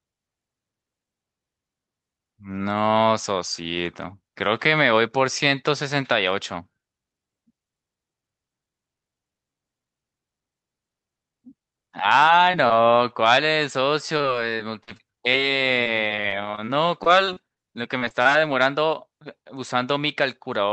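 It's a speech clip that's been through a call codec, with the top end stopping around 8 kHz, which fits Opus on a WebRTC path. There's short concealed packet loss at 12.51–12.55, 12.67–12.72, 17.98–18.03, 18.09–18.12 and 18.22–18.27 s. Each is about 20 ms of audio that never arrived, patched by stretching the preceding sound, so you hear a quick smear or wobble. The bigger issue is repeated packet loss (robotic sound) from 14.18 to 15.36 s (seven gaps, longest 38 ms) and from 15.84 to 17.58 s (twelve gaps, longest 29 ms). The concealment keeps re-filling holes back to back, so the speech turns choppy with bits missing.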